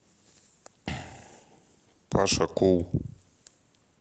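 No technical faults are audible.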